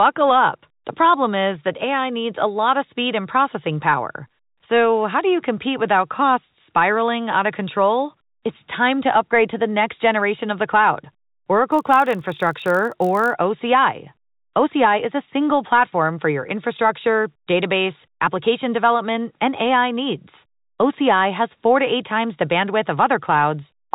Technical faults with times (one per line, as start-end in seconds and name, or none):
11.68-13.33 block size mismatch (padded)